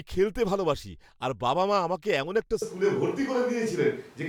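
A switch to a distant microphone hits this speech clip at 2.62 s, right after "মা আমাকে এমন একটা", and lasts to the end. The voice turns roomy and hollow in an instant and loses its bass, and room noise rises to around 30 dB below the speech, while the overall level barely moves. The likely cause is that the close microphone's signal dropped out and the recording fell back on one farther away, such as a camera's built-in microphone.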